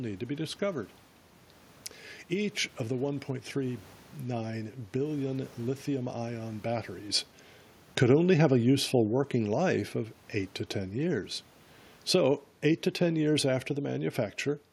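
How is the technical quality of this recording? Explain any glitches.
One glitch stands out: from 7.86 to 9.88 s, automatic gain falling. The automatic gain control judged the input too loud or its background noise too strong, and gradually lowered the level by about 3 dB, so the speech and the room noise sink together. On a waveform, the envelope tapers steadily across that span, and a spectrogram shows the whole frame, including the noise floor, dimming at once. A level change around 7 s, where the talker moves relative to the microphone, affects only the voice, not the background.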